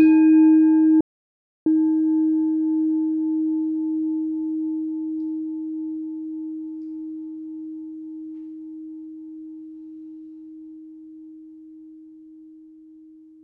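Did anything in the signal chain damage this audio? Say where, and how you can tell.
Yes. There is an audio dropout to silence from 1.01 s to 1.66 s, with about 0.65 s of signal lost. The likely cause is the input side of the chain, at the analogue connection, device link or driver, where the source went away while the recorder kept writing silence. The sound stops abruptly mid-flow and returns just as suddenly. The gap is true silence, with no room tone or noise floor. Whatever sounded during it is gone.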